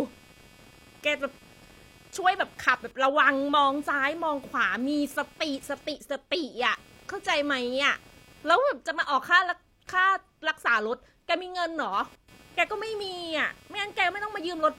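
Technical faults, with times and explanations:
Throughout: computer activity noise, a buzzy, chirping layer around 300 Hz sitting roughly 30 dB under the speech. The computer's load shifts are jostling the shared ground of the audio circuit, so the buzz follows that activity instead of the talking.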